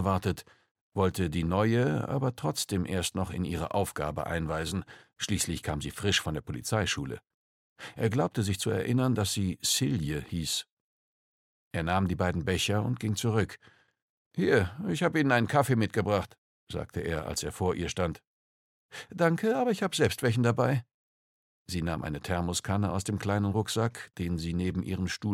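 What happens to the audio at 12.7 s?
Nothing goes wrong at 12.7 s; the audio plays through that moment intact, with no dropout, click or distortion.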